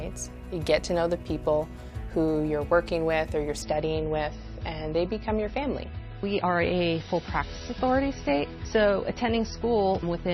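From 3.62 s to the end, the adaptive stream drops to a lower bitrate: treble vanishes above 6 kHz and the sound turns swirly, which suggests roughly 24 kbit/s MP3.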